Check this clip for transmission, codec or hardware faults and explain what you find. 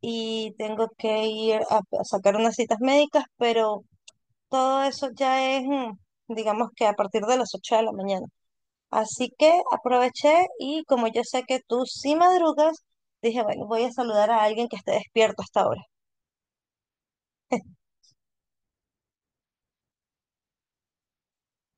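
No faults of any kind are audible in this speech.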